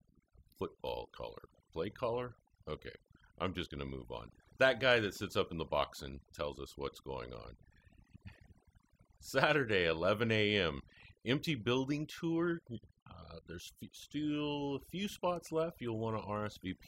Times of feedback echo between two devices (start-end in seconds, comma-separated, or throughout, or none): none